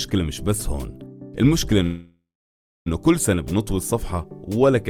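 A call audio freeze runs from 1.83 to 2.88 s. The last sound before it carries on as a fading buzz, then drops to silence for the final 0.64 s or so before the audio picks up exactly where it left off. The likely cause is packets stalling in transit until the jitter buffer emptied, so the receiver padded about 1.03 s with filler. Nothing is lost, but everything after 2.88 s now arrives about 1.03 s late.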